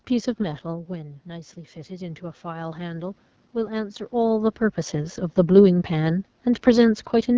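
Throughout, the AMR wideband (HD Voice) codec runs at a low rate, which fits its 8.85 kbit/s mode, and the speech sounds plainly rough and raspy. From 0.66 to 4.09 s, automatic gain rising follows a drop of about 13 dB when the talker moves away around 0.5 s. The gain climbs gradually by about 5 dB, so the voice and room noise swell together.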